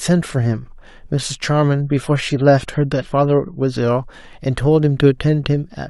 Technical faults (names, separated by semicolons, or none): adaptive stream at a lower bitrate